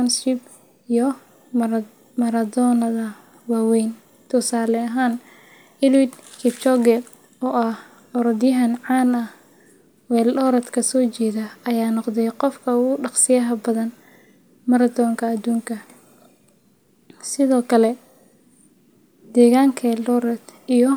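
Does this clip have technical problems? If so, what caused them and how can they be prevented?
Yes. At 5.95 s there is a single sharp snap, peaking at about -25 dBFS, laid on top of the speech. It is likely an electrical switching spike from a nearby switch, motor or static discharge arcing into the audio line. Unlike a dropout click, nothing drops out, so the speech continues unbroken beneath it. To prevent it, keep audio cables away from switched mains gear and motors, and use balanced, well-shielded connections.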